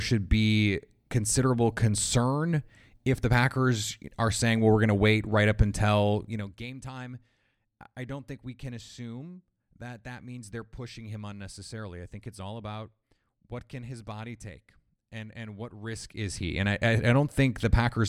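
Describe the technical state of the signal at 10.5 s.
At 10.5 s the speech signal is intact, with no fault audible at that moment.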